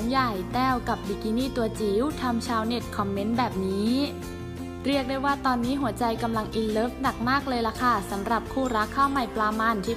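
Nothing here stands out as a technical fault; the audio runs along without any glitch or defect worth pointing to.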